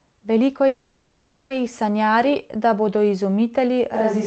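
From 0.67 to 1.53 s the speech stalls. The last sound is stretched into a fading buzz-like hiss that never quite drops to silence. After about 830 ms the speech picks up exactly where it stopped, with nothing skipped. This is a call audio freeze, most likely packets held up in transit so the jitter buffer ran dry. Unlike a packet-loss dropout, no speech is lost. The audio is delayed, and everything after it runs later by the same amount.

At 3.95 s, right after "da bodo izumitelji", the sound abruptly turns roomy and hollow and loses its low end, and it stays that way to the end. This is a switch to a distant microphone, likely because the close microphone's signal dropped out and a farther one took over. The level stays roughly the same, so this is not a gain drop. Background room noise sits about 30 dB below the speech. A change in reverb added in processing would usually come in gradually, but this change is instant.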